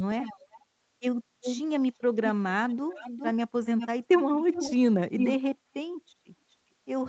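Speech heard through a call path that carries nothing above 8 kHz, with an echo leak: a delayed copy of the speech returns about 0.4 s later at 0.21–0.61, 1.43–1.61, 2.69–3.32, 3.64–4.74, 5.18–5.36 and 6.51–6.55 s. It is barely audible at 6.51 s, as loud as the direct speech at 5.18 s, and roughly 5 to 15 dB down elsewhere. The likely cause is a loudspeaker at the far end whose echo canceller let part of its microphone pickup back into the call.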